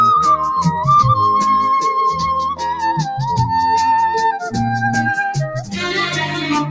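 A noise suppressor applied to music or sounds runs throughout the clip, treating held tones, ambience and decaying tails as noise and pulling them down by about 5 dB while onsets pass. Sustained sound therefore dips and recovers, pumping and thinning. The call microphone processing caps content at 8 kHz.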